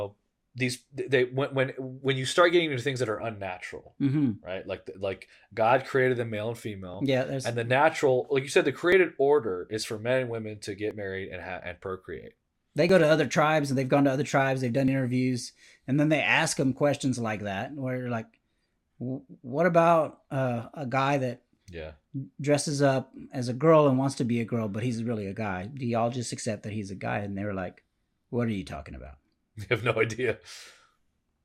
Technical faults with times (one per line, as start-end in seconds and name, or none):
0.97 overlap between stream segments
2.96 overlap between stream segments
4.95 overlap between stream segments
6.94 overlap between stream segments
8.92 overlap between stream segments
10.91 overlap between stream segments
12.89 overlap between stream segments
14.88 overlap between stream segments